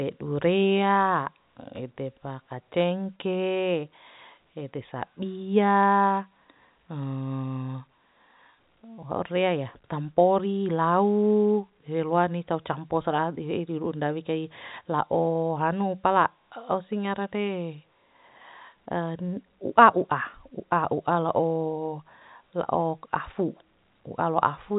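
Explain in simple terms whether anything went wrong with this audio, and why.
Nothing went wrong that I could hear: the speech has the narrow, phone-like sound of ordinary telephone coding, with nothing above about 3.8 kHz, but no dropouts, clicks, glitches or other problems stood out.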